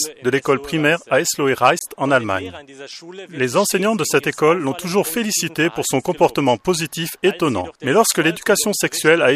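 At 1.79 s the sound drops out abruptly into a hole of silence with hard edges, ending at 1.81 s, roughly 21 ms later, and then carries on with nothing missing. This is a gap between stream segments: the time stamps of two consecutive pieces of the stream, which fits 4-second segments, fail to meet, so the player pads the roughly 21 ms of unaccounted time with silence rather than dropping audio.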